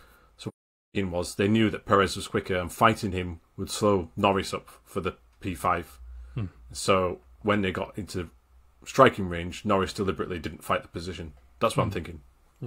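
From 0.48 s to 0.96 s the speech drops out for about 0.47 s, ending just before "was they knew that". This is AAC frame loss with muting. A run of consecutive coded frames, consistent with around eleven, never reached the decoder, so it filled that stretch with zeroed spectrum. Because AAC frames overlap, the sound fades down into the hole and back up out of it over roughly one frame each side, giving a soft-edged silence.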